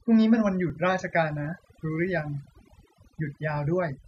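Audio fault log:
throughout: overdone noise removal. The denoiser is set too aggressively, so any frequency band near its noise estimate is pushed far down or switched off, taking the quieter parts of the speech with it. The gaps between phrases fall to near silence dotted with brief twinkling specks. On a spectrogram the background looks almost black with scattered isolated dots, and the weaker speech harmonics appear patchy and broken.
0.70 s and 2.69 s: overlap between stream segments. The speech sits in 2.0 s segments whose timestamps overlap slightly. The player discards the overlapping portion even though that audio wasn't actually duplicated, so roughly 12 ms and then 17 ms of real sound disappear. Each loss is heard as a small click or tiny skip, and the two fall about 2 s apart. On a waveform the trace jumps abruptly to a new level at each point, and a spectrogram shows a thin vertical broadband line.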